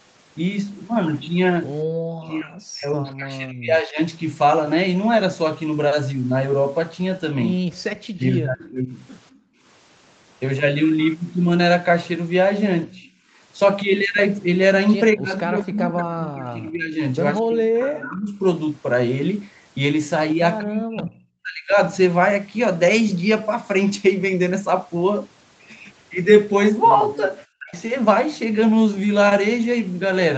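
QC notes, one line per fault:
1.85–1.94 s and 7.61–9.62 s, background gated by the echo canceller: the room tone beneath the speech dips sharply and then comes back. The first dip lasts about 100 ms and falls by about 20 dB. The second span holds about half a second of dropouts in total, reaching about 27 dB down. The echo canceller clamped the microphone while the far end's loudspeaker was active and released it afterwards, so the ambience pumps in and out.
2.22–2.27 s, 8.65–9.39 s, 13.03–13.10 s and 27.14–27.41 s, echo leak: a faint, delayed copy of speech trails in. It lags by about 202, 206, 208 and 218 ms and sits well below the main speech, weakest at 13.03 s and loudest at 27.14 s. This is likely loudspeaker sound picked up by the far end's microphone that its echo canceller failed to remove completely, so a residue was sent back down the line.
2.22–4.0 s, 8.17–8.96 s, 12.86–21.76 s and 27.59–27.75 s, speech suppressed in double talk: the talker's speech sinks, dulls or breaks into pieces. 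The drops reach about 40 dB at 2.22 s, 12.86 s and 27.59 s, where they are nearly complete, and about 15 dB at 8.17 s. Roughly 2 s are affected in the first span and about 4 s across the long middle span. This likely happened because both sides were talking at once, and the echo canceller, unable to separate the talker from the echo, attenuated both.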